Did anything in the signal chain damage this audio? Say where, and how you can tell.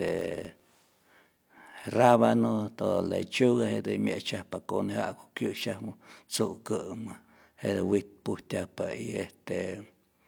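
Yes. From 0.0 to 1.87 s the speech carries a filter restarted on every block, a fault in the block-based processing stage. A filter loses its state at each block boundary and restarts from zero, so each block opens with a small transient. These add up to a buzz near 46.9 Hz, which fits a 1024-sample block. Unlike mains hum, the buzz rises and falls with the speech level and stops after 1.87 s.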